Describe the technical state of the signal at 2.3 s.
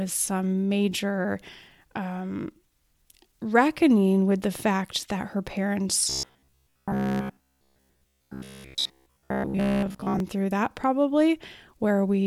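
Around 2.3 s the speech signal is intact, with no dropout, clipping, distortion or other fault audible at that moment.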